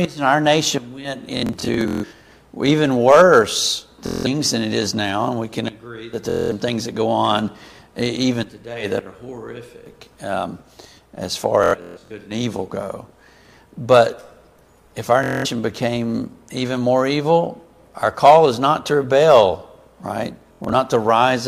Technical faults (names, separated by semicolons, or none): Bluetooth stutter